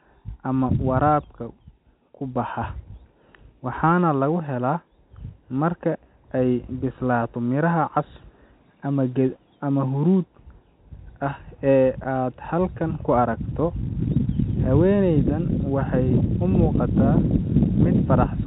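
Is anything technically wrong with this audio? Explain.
No, the speech simply carries the narrow telephone band of G.711 coding, with nothing above 4 kHz and a faint level-following quantisation hiss, as that format normally does.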